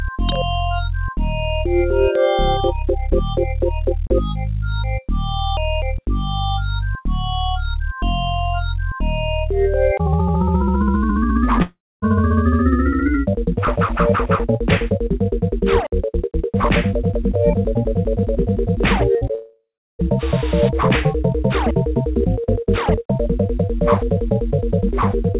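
At 11.62 s the sound gives way to a fading buzz that thins out, with about a quarter second of silence before the audio resumes at 12.04 s, some 0.4 s of material simply gone. This is a long network dropout: the likely cause is that no packets arrived for that stretch, so the receiver stretched the last sound until it ran dry and then played nothing.

Near 19.18 s and again near 19.27 s come two brief smears, the first lasting about 40 ms and the second about 20 ms. Each is short concealed packet loss: a few hundredths of a second failed to reach the decoder in time, and the gap was patched by extending the preceding sound and blending back in.

Right after, from 19.35 s to 20.01 s, a second long network dropout follows, this time likely from a longer run of lost packets. The fill fades, then about 0.36 s of silence remains before the audio returns, with roughly 0.64 s lost. Throughout, the narrow telephone band with nothing above 4 kHz fits a G.711 mu-law call path.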